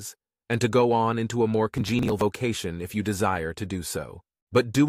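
From 1.74 to 2.21 s there's a burst of processor overload crackle: a gritty tearing laid over the audio where the processor kept missing its buffer deadlines. The missed chunks are just skipped, leaving lots of tiny hard-edged gaps, which fits buffers of around 10 ms with about 20 dropped across the burst.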